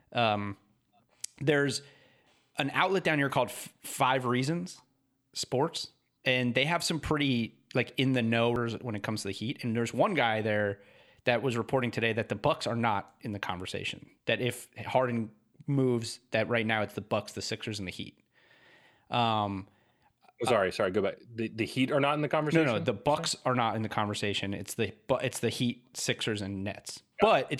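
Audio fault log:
Nothing stood out on listening to the speech.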